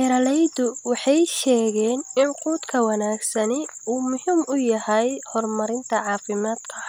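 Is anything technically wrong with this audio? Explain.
No, nothing technically wrong turns up in this speech recording; it all sounds fine to my ear.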